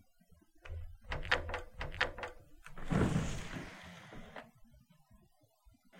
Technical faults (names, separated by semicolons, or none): doubled audio track